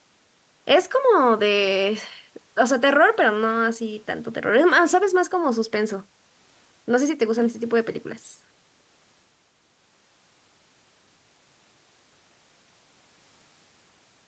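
Speech, with no technical faults to report.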